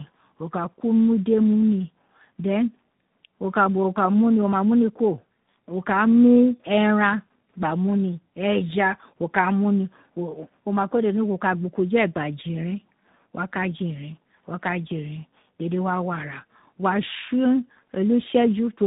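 Throughout the speech, tandem speech coding is audible: the signal passed through G.729A at 8 kbit/s, then G.711 A-law, then G.726 at 40 kbit/s, so two speech codecs each re-encoded the previous one's errors. Nothing survives above 3.8 kHz. Unlike simple telephone band-limiting, which is only muffled, the voice here is also rough and warbly, and the degradation is more pronounced than any single codec would produce.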